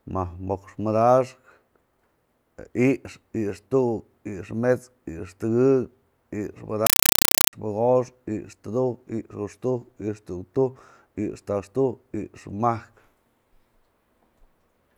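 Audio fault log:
6.86–7.53 s: compressed stream played as audio; undecoded AC-3 data treated as samples gives loud chattering static, 5.33 ms noise bursts repeating 31.25 times a second.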